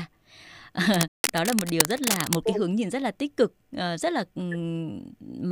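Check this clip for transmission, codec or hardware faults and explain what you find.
Two faults are audible, overlapping early in the speech.

From 0.94 to 2.39 s, cable scratch noise: uneven rustling bursts about as loud as the speech, likely from a worn connector whose contact resistance fluctuated. It is irregular crackle, unlike steady hiss.

From 1.08 to 1.24 s, a playback stall: the sound halts for about 0.16 s, likely from a starved player buffer. It is a true gap, not a brief dropout click.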